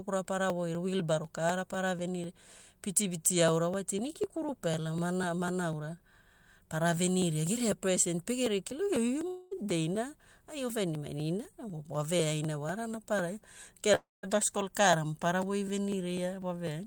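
Periodic USB or driver dropouts run from 0.25 s to the end, every 0.25 s: brief audio chunks are skipped, leaving evenly spaced ticks across the speech. A long network dropout, likely from packets not arriving, hits at 9.27 to 9.54 s, where about 240 ms is lost and the last sound is stretched into a fading buzz or hiss. Another, at 13.95 to 14.26 s, loses about 280 ms, and its fading fill includes roughly 180 ms of silence.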